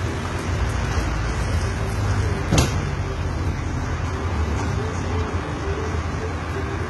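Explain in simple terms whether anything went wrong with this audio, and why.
The audio was most likely squeezed hard by HE-AAC compression, which stores only the lower part of the sound and rebuilds the treble by copying lower bands upward. Throughout, the top end sounds gritty and metallic, with nothing at all above 11.8 kHz.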